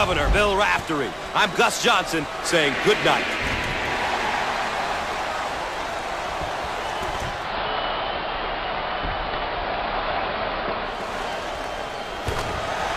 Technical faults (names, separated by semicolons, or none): digital radio blending to analogue